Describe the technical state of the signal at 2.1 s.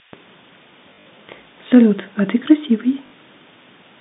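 A switching power supply is running in an audible burst mode or beating with another one for the whole clip, including 2.1 s, so a switching supply whistle sits over the speech: a thin tone wandering between 4.71 and 5.08 kHz, roughly 20 dB below the speech level.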